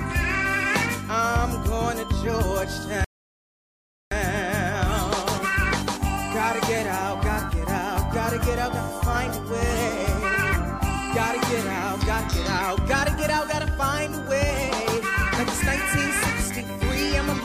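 At 3.04 s the sound drops to silence and stays there until 4.12 s, then picks up exactly where it left off. This is a rebuffering stall: the player exhausted its downloaded audio and halted playback until more data arrived. No material is skipped or repeated. The gap simply inserts about 1.07 s of dead time into the timeline, so everything after it plays later than it would have.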